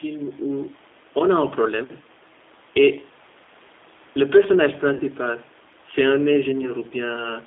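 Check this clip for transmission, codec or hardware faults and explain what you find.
Two faults are audible: codec damage across the whole recording and one short dropout near the five-second mark.

G.729 codec, throughout: the speech sounds thin, rough and faintly synthetic, confined to roughly 250 Hz to 3.6 kHz. The 8 kbit/s coder rebuilds each frame from a vocal-tract filter, pitch predictor and a few pulses.

VoIP packet loss concealed by the speech codec, 4.94 to 5.03 s: the speech smears into a buzzy tone or coloured noise that fades for about 60 ms, which fits roughly six lost 10 ms frames. The decoder extrapolated from its last pitch and filter while lowering the gain.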